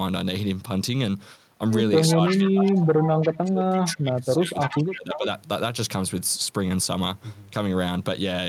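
A speech recording in which the talker's level is pulled down by speech suppressed in double talk from 2.16 to 3.06 s and again from 3.43 to 5.27 s, dipping by as much as about 20 to 25 dB in broken stretches. The likely cause is an echo canceller that cannot separate the local talker from loudspeaker echo while the far side is also speaking, so it attenuates both. Echo leak overlaps these stretches, with a delayed copy of the voice arriving 338 ms late at 2.27 to 2.8 s, 3.04 to 3.38 s, 4.61 to 4.96 s and 5.13 to 5.26 s. It sits around 10 dB below the direct speech, dropping to around 15 dB below in the last fragment. This is likely loudspeaker pickup that the far end's canceller failed to remove and sent back down the line.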